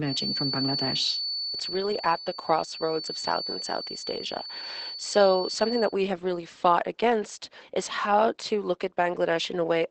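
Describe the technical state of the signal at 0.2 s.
At 0.2 s a feedback whistle is sounding. It runs from the start to 5.97 s, ending just before "have really fought against". A loudspeaker-to-microphone loop held right at the edge of oscillation is the likely cause. It rings a steady 4.5 kHz tone about 10 dB below the speech, visible on a spectrogram as a thin horizontal line.

Beneath it, Opus voice compression in SILK mode makes the speech muffled and slightly hoarse, which fits a bitrate near 12 kbps. On a spectrogram the energy stops abruptly at 8 kHz, and the harmonics look smeared and coarse.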